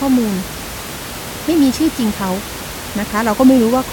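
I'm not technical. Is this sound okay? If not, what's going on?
Yes, no faults here.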